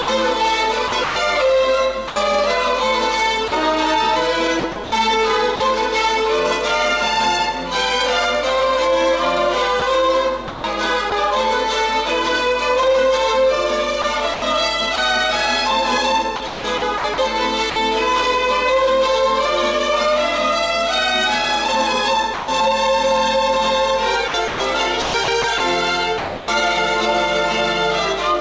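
Sound chopped by the voice detector appears at 0.02–2.16 s, 3.48–5.60 s, 9.80–11.12 s, 14.02–14.98 s and 16.36–17.76 s. In each stretch the sound breaks up as quiet portions give way to a flat synthetic hiss, totalling about 300, 240, 200, 120 and 400 ms respectively. The likely cause is the sender's voice detector repeatedly switching transmission off and on, with the receiver filling each gap with comfort noise.

Sound dropped by the voice detector occurs once, at 22.34–22.48 s. A single 140 ms piece of sound is lost and replaced by steady noise before the sound returns. This is likely the detector mistaking a soft passage for background and stopping sending until it triggered again.

Sound chopped by the voice detector returns at 24.28–26.48 s. This is the heaviest instance, with about 680 ms swapped for comfort noise across the stretch. Throughout the clip, the call codec's band limit leaves nothing above 8 kHz, consistent with G.722.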